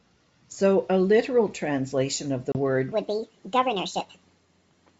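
Right after "a literal translation of", at 2.52 s, there is packet loss on an ADPCM call: a hard silent gap of about 30 ms, a few packets' worth. Unlike a plain dropout, the sound then comes back slightly distorted until the decoder's predictor catches up. From 2.92 s to the end, the section plays at the wrong speed, 1.49 times too fast, likely from playback on a mismatched clock. It sounds high and hurried, about seven semitones up. Because the tempo rises along with the pitch, this is a speed error and not a pitch-shift effect.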